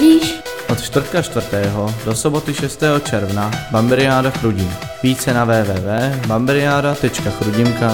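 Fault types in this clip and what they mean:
dropped samples: Five isolated sharp clicks, at 0.31, 1.32, 3.89, 5.98 and 6.93 s, each a thin vertical line in the spectrum. The likely cause is a tiny run of missing samples, about 0.7 ms each, making the waveform jump abruptly ahead.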